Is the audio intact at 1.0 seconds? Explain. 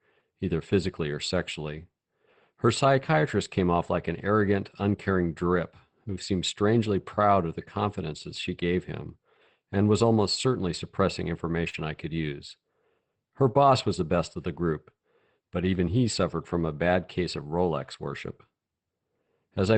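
Yes, the speech at 1.0 seconds is intact, with no dropout, glitch or distortion at that moment beyond the ordinary character of the call path it passed through.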